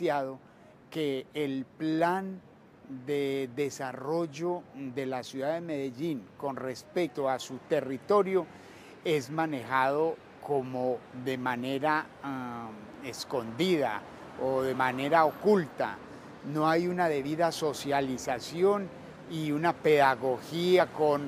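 At 7.07, 17.23 and 20.79 s there are compressed frames skipped: the decoder loses a few whole frames and the sound jumps ahead, by around a tenth of a second, a hair, then about 50 ms.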